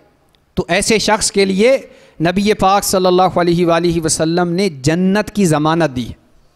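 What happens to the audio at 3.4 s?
Nothing goes wrong at 3.4 s; the audio plays through that moment intact, with no dropout, click or other audible fault.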